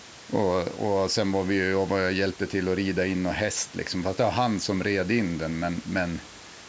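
Nothing stood out on listening to this speech, which carries the expected call microphone processing with no content above 8 kHz and a low room noise sitting about 24 dB beneath the voice.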